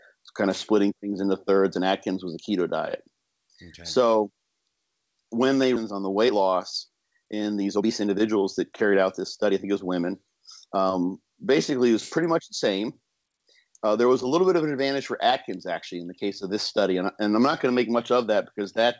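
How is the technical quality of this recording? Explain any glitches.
The recording has a sudden jump forward followed by two stretches of hurried playback, all within the first half. It carries the coding noise and 8 kHz top-end limit of a call path, which fits G.722 at 64 kbps.

Skip ahead, at 5.76 s: roughly a second of audio is simply gone. While later audio was already queued, a stretch was dropped in transit or discarded when the jitter buffer overflowed, so the sound on either side is butted together with no gap or fill.

Jitter buffer speed-up, from 5.91 to 6.49 s and again from 6.89 to 9.04 s: having built up more delay than it targets, the receiver repeatedly cut out short pitch-period slices, about a tenth of a second and then about 0.3 s in total. Playback runs at 114% and then 116% of normal speed at unchanged pitch, so the sound feels rushed.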